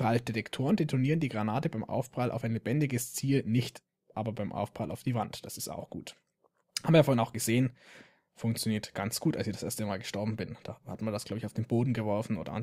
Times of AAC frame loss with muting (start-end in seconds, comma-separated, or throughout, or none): none